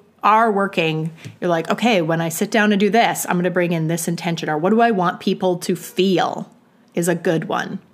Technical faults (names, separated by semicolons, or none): none